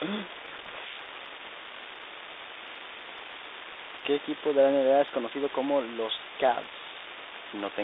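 From the start and through the whole clip runs an unreliable data bit: one marginal line flips its bit in a random share of samples, each error an equal-sized spike. The result is a steady crackle that continues through pauses, unlike codec noise, which would fall silent with the speech.

Between 0.36 and 1.02 s comes a codec payload misread. The decoder takes the G.726 code words with their bit order reversed, so it reads valid-looking data wrongly and buries the speech in harsh distortion. It is confined to this stretch, which sets it apart from the milder, level-following rasp of a low-bitrate codec. Outside it, the light telephone-band coding, consistent with 32 kbit/s, is heard as normal.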